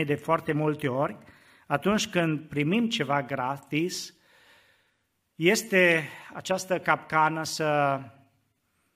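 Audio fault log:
3.95 s, overlap between stream segments: where two segments' time stamps overlap, the player trims about 15 ms of speech that was never actually duplicated, so the waveform jumps across the missing stretch and is heard as a brief click or tiny skip.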